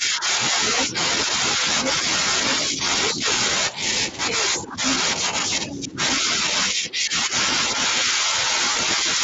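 A speech clip with some classic speakerphone trouble. The talker keeps dipping by about 10 dB in patches: about 0.7 s spread over 0 to 1.63 s, about 0.5 s between 2.68 and 4.78 s, and about 1.5 s from 5.69 s to the end. That's speech suppressed in double talk. It most likely happens because the echo canceller can't tell the talker from the far-end echo while both are active, so it turns everything down. Right on top of that, the other side's voice is leaking through from 0.69 to 3.22 s and again from 4.3 to 5.77 s. It sits only about 5 dB under the talker, so the canceller is likely leaving plenty of the loudspeaker signal in the mic feed. There are also two short patches of VoIP packet loss concealed by the speech codec, at 1.95 to 1.98 s (20 ms missing) and 8.71 to 8.76 s (40 ms missing). In each one the decoder fills the gap by stretching the last bit of sound into a fading smear, and the audio stays weak or distorted for a moment afterwards. 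The Speex coding underneath adds only light colouring.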